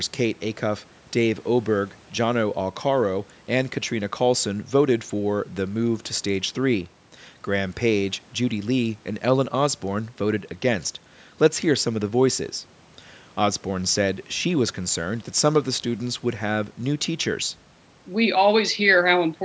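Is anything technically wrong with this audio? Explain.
No, nothing stood out as a technical problem on listening to this speech clip.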